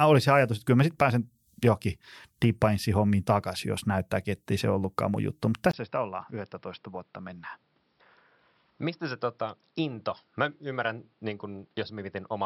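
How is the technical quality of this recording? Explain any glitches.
The recording has one clear fault: at 5.71 s the speech abruptly changes character and stays degraded until the end.

From 5.71 s onward, the input likely switched to a poorer device. A brief gap of about 20 ms marks the change. After that, nothing reaches above 5.5 kHz, so the speech sounds dull and boxy, is about 10 dB quieter, and carries new, faint background noise. On a spectrogram, the upper band goes empty right at the switch. The waveform shows a short flat dropout, followed by a visibly smaller envelope.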